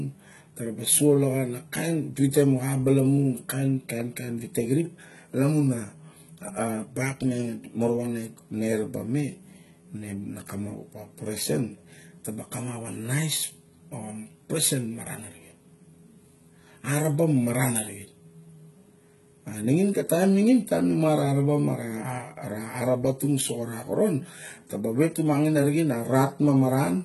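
From start to finish, the speech has heavy damage in the treble, and nothing reaches above 11.8 kHz. The likely cause is HE-AAC compression at a low bitrate, around 16 kbps. The treble is rebuilt from copied lower bands, so s sounds turn gritty and lispy.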